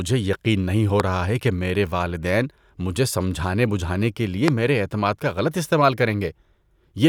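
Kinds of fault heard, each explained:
Loud pop: two sharp pops, at about 1.0 s and 4.5 s, jump roughly 20 dB above the speech, which carries on underneath, likely from a brief voltage spike.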